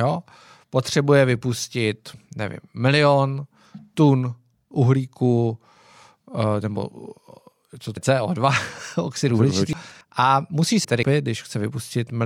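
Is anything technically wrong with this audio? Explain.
Yes. Compressed frames are skipped at 7.87–7.97 s, 9.73–10.01 s and 10.85–11.12 s. Whole frames are not played, so the speech jumps ahead by roughly 0.1, 0.5 and 0.4 s.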